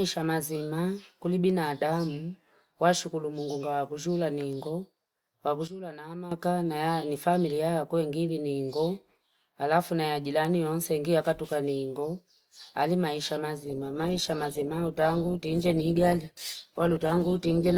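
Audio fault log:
5.68–6.32 s, sudden gain jump: level drops by about 12 dB in one step and recovers at 6.32 s, with the background noise falling and rising with the speech. That shared, instant shift likely comes from a gain setting applied without a ramp, unlike a compressor's gradual movement.
13.67–17.78 s, adaptive stream at a lower bitrate: codec artefacts abruptly rise, consistent with a drop from about 64 to 16 kbit/s Opus. There is no gap or dropout at the switch, which distinguishes it from packet loss.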